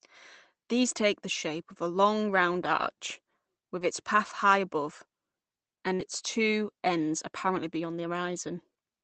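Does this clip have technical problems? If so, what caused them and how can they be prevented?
Yes. The call lost packets in the network, and the receiver had to cover the holes.

Lost packet rebuilt from error correction: packets went missing, but each following packet carried a low-bitrate copy of the lost one (Opus in-band forward error correction), so the decoder played that copy instead of leaving a gap. This happens at 2.77–2.87 s, just after "of a long round" (60 ms, which fits three 20 ms packets); at 3.79–3.85 s, just before "its path high above" (40 ms); at 5.99–6.01 s, just before "two ends"; and at 7.55–7.57 s. Each rebuilt stretch sounds rougher and noisier than the audio around it. Prevention: improve the network path, for example with a wired link or less congestion, so that fewer packets are lost.

Short concealed packet loss: at 5.95–6.01 s, about 40 ms of audio arrived too late or not at all. 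The receiver filled about 37 ms by continuing the preceding speech, following its pitch if voiced or using shaped noise if not, then crossfaded back into the real signal. It is heard as a brief smear or wobble that runs straight into the rebuilt packet before "two ends". Prevention: reduce jitter and loss on the link, or allow a slightly deeper jitter buffer.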